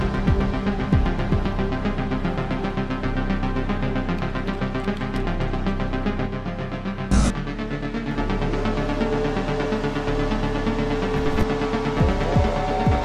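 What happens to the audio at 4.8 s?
Nothing goes wrong at 4.8 s; the audio runs on cleanly through that moment with no dropout, click or other fault.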